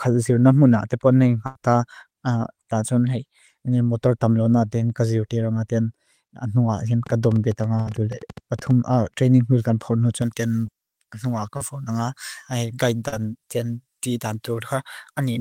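At 1.46 to 1.56 s a burst of packet loss removes about 90 ms of speech. The receiver continues the last sound and fades it down before the speech jumps ahead with that stretch missing. A second burst at 7.81 to 7.87 s drops about 50 ms the same way. Both are longer than a brief smear, and each leaves an audible gap in the speech.

From 7.07 to 8.72 s, just before "training will kan po", a train of clicks ticks over the speech and the pauses alike. There are roughly twenty of them at about 11.5 per second, unevenly spaced and roughly as loud as the speech. Each is a sharp, repeated tick with the same shape, not a concealed smear. Interference from nearby equipment or a faulty connection is the likely cause.

From 10.22 s, right after "training will kan po", to the end, pre-emphasis left on makes the speech thin, bright and hissy. The treble stands about 11 dB higher at 10 kHz than at 1 kHz, which fits a J.17 boost that was never undone. 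This is a steady tonal tilt, not a momentary event.

Within that bright section, short concealed packet loss appears at 10.67 to 10.69 s, 11.57 to 11.61 s and 13.08 to 13.13 s, losing 10 to 40 ms each time. The decoder patches each hole and blends back, leaving a quick wobble or smear rather than a held buzz.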